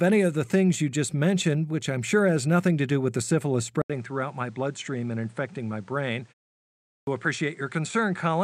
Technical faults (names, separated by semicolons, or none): input switched to a poorer device; clipped start after a pause